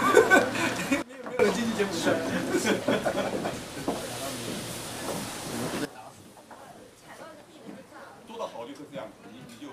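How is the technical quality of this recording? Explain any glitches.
The recording has two sudden gain jumps. From 1.02 to 1.39 s, the level drops by about 19 dB, then snaps back. At 5.85 s, it falls by about 16 dB and stays down to the end. In both cases the sound and its background noise shift together, with no fade. The likely cause is a digital gain setting applied from one sample to the next, without a ramp to smooth the change.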